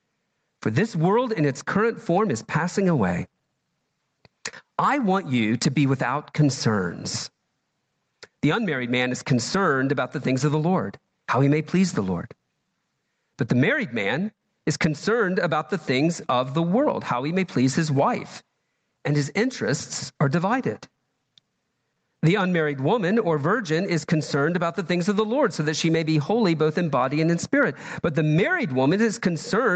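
A speech recording, band-limited to 8 kHz by the call path, with gain pumping throughout. The gain swings by roughly 20 dB. The likely cause is excessive input gain clamped by a fast limiter.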